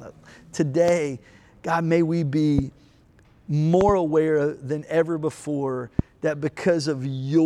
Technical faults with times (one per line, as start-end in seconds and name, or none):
0.88-0.91 loud pop
2.58-2.61 loud pop
3.81-3.91 loud pop
5.99-6.01 loud pop